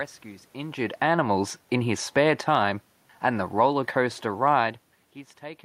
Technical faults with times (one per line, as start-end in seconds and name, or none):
1.88-5.03 automatic gain falling